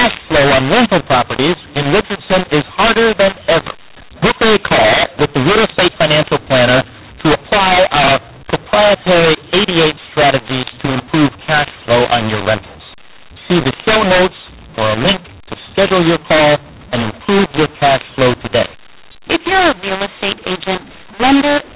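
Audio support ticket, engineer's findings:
Harsh, gritty distortion on the speech through the whole clip, with hiss filling the pauses where there should be near-silence. Mu-law and A-law mixed up: A-law-coded G.711 decoded as mu-law, so the companding curves don't match, levels get scrambled, and the quietest samples land well above zero. Band-limiting fits the 8 kHz telephone path.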